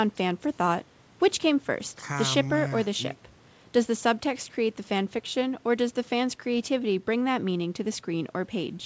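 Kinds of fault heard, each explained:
Nothing stood out on listening, beyond the ordinary call-path sound of a wideband codec whose content stops at about 8 kHz.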